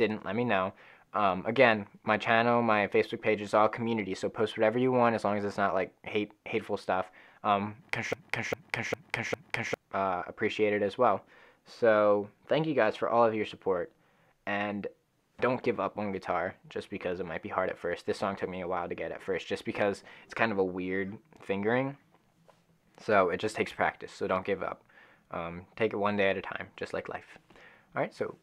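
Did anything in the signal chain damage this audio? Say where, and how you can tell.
Yes. From 8.13 s to 9.74 s there's a broken-record loop: a piece about 0.40 s long plays four times back to back, identical each pass, which accounts for that whole 1.6 s stretch. The likely cause is a stall in the player, encoder or stream, which kept pushing out the last fragment it held instead of fresh audio. Whatever should have played during those 1.6 s is gone, replaced by the repeats.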